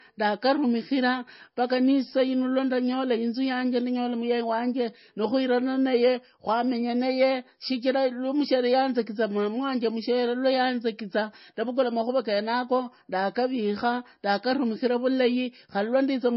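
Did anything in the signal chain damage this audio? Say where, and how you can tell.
Yes. At the codec stage, the whole clip has nothing above 5.6 kHz, and the speech carries the smeared, swirly texture of heavy MP3 coding. This is likely low-bitrate audio saved at a high bitrate, around 24 kbit/s re-encoded near 171 kbit/s. A spectrogram shows a flat ceiling at 5.6 kHz that the larger file cannot restore.

Hard clipping occurs from 2.07 to 2.22 s, where a level stage or converter was overdriven by about 4 dB. The peaks are sheared flat, giving a brief harsh crackle. The waveform shows squared-off tops, and the spectrogram shows a burst of harmonics for those 0.16 s.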